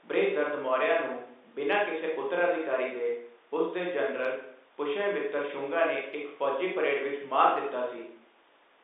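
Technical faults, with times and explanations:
Nothing here counts as a technical fault; the speech simply carries the narrow, boxy character of ordinary G.711 telephone coding, with the sound held to roughly the 300 Hz to 3.7 kHz line band.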